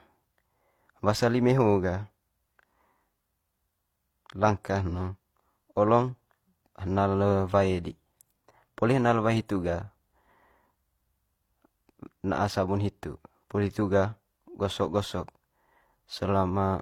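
Transcoding between lossy codecs runs through the whole of this speech clip: the artefacts of more than one codec are layered on top of one another, and nothing is left above 18.5 kHz. The likely cause is a chain of re-encodes, with the sound pointing to HE-AAC at around 32 kbit/s, then Opus near 48 kbit/s, then HE-AAC again near 40 kbit/s. Each pass spends bits re-coding the previous pass's smearing and adds its own, while the lowest cut-off persists.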